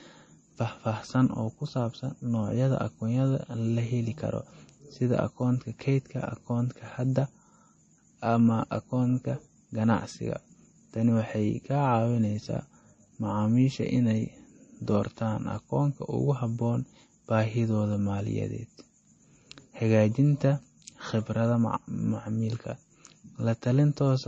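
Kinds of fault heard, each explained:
MP3 compression: speech sounds plainly watery and stops at 8.3 kHz, a flat spectrogram ceiling with flickering gaps below, likely from roughly 32 kbps encoding.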